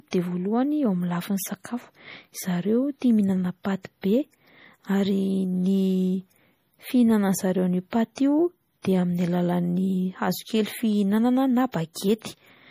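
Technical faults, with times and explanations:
Throughout, MP3 compression: the damage is plainly audible across the whole clip, and nothing gets through above about 15.3 kHz, so the treble has a hard ceiling. The likely cause is a low-bitrate MP3 encode, which fits something around 40 kbps. The encoder is starving for bits, so it chops the top end off and drops quieter detail that comes and goes between frames. That leaves the sound watery, with sibilants getting swirly.
1.64, 8.15 to 8.17 and 11.72, pre-echo: each sharp onset has a brief hiss smeared in ahead of it, spreading about 13 ms, 20 ms and 19 ms. The second one lands right after "fihinanan'zareo an'io" and the third after "fihinanana na". The codec spreads its quantisation noise across a whole transform block. When a loud attack sits late in that block, noise sized for the loud part leaks into the quiet gap before it, so the attack sounds softened.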